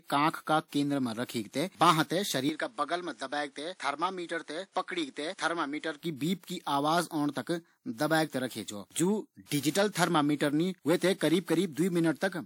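Speech, and right after "बांह थें" at 2.49 s until 6.02 s, before "की बीप की आवाज", nothing above 10.5 kHz comes through, the level drops about 5 dB and a different noise floor appears, with no gap at the switch. Likely the input switched to a poorer device for that stretch.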